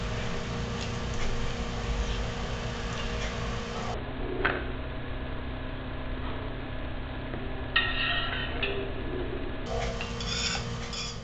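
From 3.94 s to 9.66 s a section plays at the wrong speed, running at 0.547 times its proper rate, so the sound drops by roughly ten semitones and drags, heavy and slowed. The likely cause is a player or editor fitting that stretch to the wrong clock. On a spectrogram every harmonic band shifts down to just over half its frequency for that span, and on the waveform the cycles and envelopes widen out.

From 10.75 s to the end at 11.23 s, zipper noise rides on a fade. The level falls by about 20 dB in unsmoothed 1 dB steps, around fifteen a second, and each jump leaves a small click, giving a fast ticking texture under the decaying sound. The waveform envelope shows a staircase, and the spectrogram shows faint vertical broadband lines at each step.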